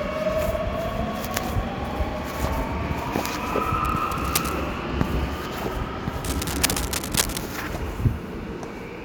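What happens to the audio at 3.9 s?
From 3.84 to 4.53 s, cable scratch noise rasps over the sound, only slightly quieter than it. The likely cause is a worn cable or connector being moved, its contact resistance flickering. On a spectrogram it shows as dense, ragged broadband streaks; the waveform turns jagged and spiky.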